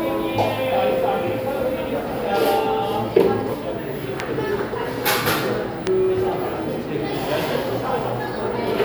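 At 4.20 to 4.22 s a single loud pop jumps out about 15 dB above the sound, and at 5.87 to 5.89 s a second, harder one peaks roughly 20 dB above it. Each is a sharp thump, likely from a sudden voltage pulse such as static or a switch transient, shaped briefly by the downstream circuitry. Unlike a dropout or gap, the sound keeps running beneath both pops without any break.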